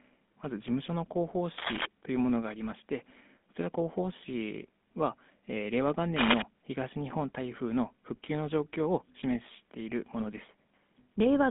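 Throughout, the speech has passed through a GSM full-rate codec, which fits a 13 kbps stream. It rebuilds the voice from a coarse vocal-tract model and sparse pulse excitation, leaving a plainly audible buzzy, gravelly roughness, a 150 Hz to 3.6 kHz band, and nothing above 3.8 kHz.

From 1.58 to 1.86 s and again from 6.16 to 6.42 s, cable scratch noise appears, likely from a worn cable or connector whose contact resistance flickered as it moved. Dense, ragged rustling bursts sit over the speech, about as loud as it the first time and somewhat louder the second.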